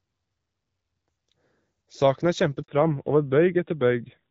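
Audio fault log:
2.62 to 2.68 s, handover gap: the speech drops to silence for 60 ms because no speech frames arrived while the call switched networks.
2.68 to 4.31 s, fallback to narrowband: speech turns duller and rougher with nothing above 4 kHz, as the call leaves HD Voice for a narrowband codec.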